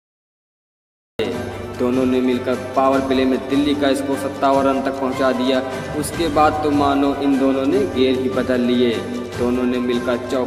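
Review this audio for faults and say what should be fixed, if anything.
There's a cut-off start here. The first 1.19 s is pure digital silence, and then the sound just appears at 1.19 s already in progress, with no natural attack or fade-in leading up to it. That points to capture or the stream kicking in late, after the sound had already begun, so whatever came before that moment was never recorded. It's worth re-recording or re-fetching the opening if you need the full start. To prevent it, arm the recorder or open the stream with a bit of pre-roll before the sound begins.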